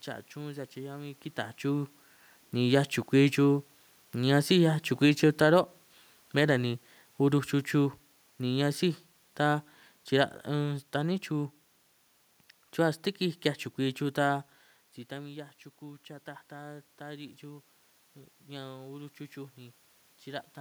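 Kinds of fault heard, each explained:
Automatic gain falling: from 5.07 to 11.24 s, speech and background sink together by about 6 dB as the gain control, finding the input too loud or its background noise too strong, turns down.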